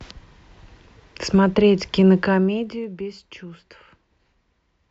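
From 2.16 to 3.0 s the speech drops in level by about 15 dB, and the move carries zipper noise. The gain is stepped down in increments of about 1 dB at around twenty steps a second, with no smoothing between steps, so each jump leaves a small discontinuity in the waveform. Together they form a rapid ticking or zipping texture over the speech for the length of the fade.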